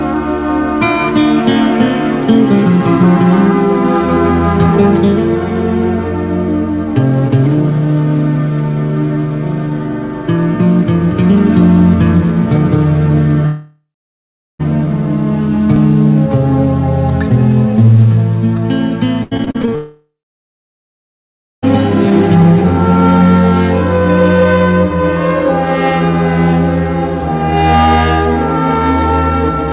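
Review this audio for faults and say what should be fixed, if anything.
Long network dropout occurs twice. The first runs from 13.46 to 14.61 s, with about 1.1 s of audio missing. The second runs from 19.75 to 21.64 s, with about 1.9 s missing. In each, the receiver extends the last sound to cover the hole. That patch then gives way to silence, about 0.73 s in the first and about 1.5 s in the second. The audio resumes later, and the lost section never returns. The likely cause is a network stall. A more stable connection or a deeper jitter buffer would prevent it.

A dropped buffer (overrun) happens at 15.76 s. Around 30 ms of audio vanishes. The audio jumps forward with no silence in between, because the sound on either side of the loss is joined directly. This likely happened because the capture program was late reading its samples and the hardware wrote over them. Raising the capture thread's priority or enlarging its buffer would prevent it.

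Repeated packet loss (robotic sound) runs from 19.23 to 19.73 s. Eight separate gaps fall in that half second, and the longest is 79 ms. Each gap is covered by repeating the preceding sound, and about 41% of the span is patched this way. The sound turns choppy, with pieces missing. This stretch leads straight into the second dropout. Fixing packet loss on the link, or adding forward error correction, would prevent it.

Nothing above 4 kHz comes through, which fits the narrowband G.711 call codec used on this path.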